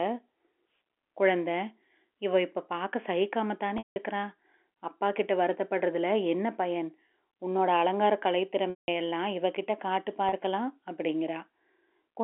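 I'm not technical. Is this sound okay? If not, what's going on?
No. At 3.78 to 3.96 s and 8.70 to 8.88 s the speech briefly goes buzzy, fades to silence, then eases back. At 10.29 to 10.32 s a sound is held for a moment. This is packet loss with pitch repetition: chunks of audio went missing, and the receiver covered each gap by replaying the last bit of sound.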